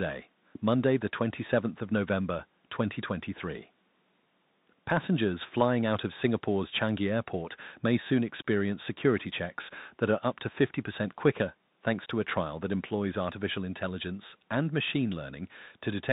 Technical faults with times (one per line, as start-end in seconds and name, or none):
0.00-16.12 Bluetooth CVSD headset codec